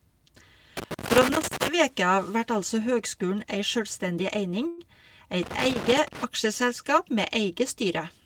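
From 0.77 to 1.68 s, and again from 5.43 to 6.24 s, loose connector crackle breaks into the speech: a worn contact keeps making and breaking, chopping the signal into irregular scratchy bursts. On a waveform this shows as ragged dropouts and spikes, and on a spectrogram as scattered broadband vertical streaks.

At 4.67 s a call audio freeze holds the sound for about 0.1 s as a brief fading buzz, likely because delayed packets emptied the jitter buffer. The speech then resumes from where it stopped, with nothing lost, but now running about 103 ms later. A spectrogram shows a smeared, stretched band instead of speech detail.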